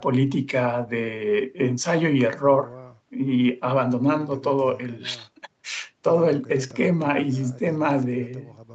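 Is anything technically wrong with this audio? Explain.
No, nothing is technically wrong: the speech carries the ordinary traits of a call's microphone processing and an Opus-coded WebRTC path, with the band ending around 8 kHz as that route would produce.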